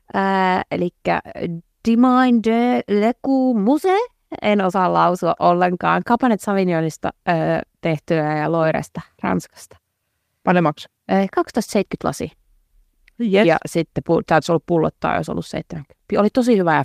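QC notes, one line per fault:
No faults were found in this speech recording. Nothing calls for a note at any point.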